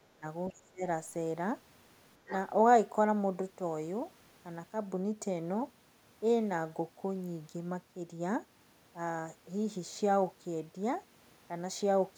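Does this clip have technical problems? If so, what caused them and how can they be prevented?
Yes. The speech is suppressed in double talk at 0.08 to 0.25 s and again at 0.5 to 0.83 s, with the level dipping by roughly 20 dB and then 25 dB. The likely cause is an echo canceller that, with both sides talking at once, could not separate the talker from the loudspeaker echo and turned everything down. Unlike a packet-loss dropout, the level is turned down by the canceller rather than lost in transmission. Using a headset, or an echo canceller with better double-talk detection, prevents this.

At 2.28 to 2.33 s, there is a brief scrap of the other side's voice leaking through, sitting about 15 dB below the main speech. This likely happens because the far side was playing on a loudspeaker and the echo canceller left some of it in the microphone signal. It differs from room reverberation because it is a second, separate voice, not a smeared tail of the talker's own sound. 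Headphones, or lower loudspeaker volume with a well-converged canceller, keep it out.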